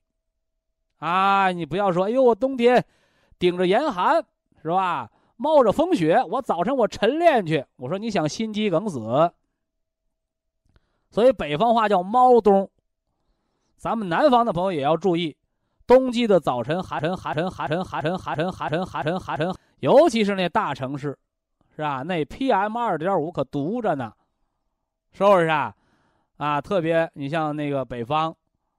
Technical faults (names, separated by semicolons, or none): broken-record loop